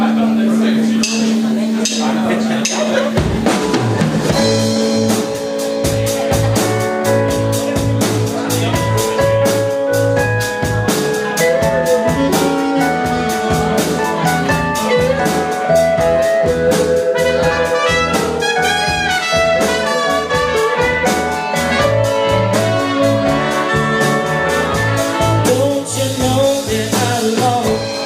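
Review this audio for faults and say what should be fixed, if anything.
Nothing to fix: no faults found anywhere in the recording.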